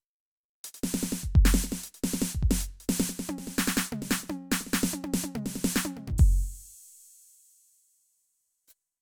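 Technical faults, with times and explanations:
No technical faults can be heard in this music.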